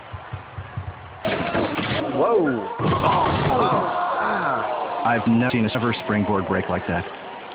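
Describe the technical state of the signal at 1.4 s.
At 1.4 s you're inside a chunks-out-of-order stretch running from 1.25 to 2.0 s: one 250 ms chunk lands two chunks late, so nothing's missing but the sequence is shuffled, giving a jumbled-sounding moment with three hard joins.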